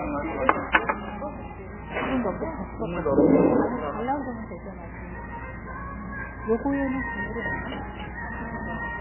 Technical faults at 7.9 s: MP3 compression

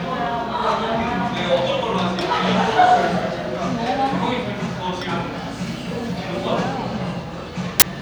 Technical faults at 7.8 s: file tags played as audio

